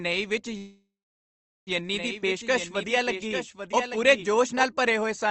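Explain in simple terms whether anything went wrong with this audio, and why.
At 0.57 s the sound stalls into a fading buzz and then silence until 1.69 s. That's a call audio freeze, likely from delayed packets; it resumes where it stopped.

From 1.94 s to 4.63 s, starting just before "ਭਰੇ ਹੋਏ", a quieter doubled audio track trails about a second behind, likely a second copy mixed in.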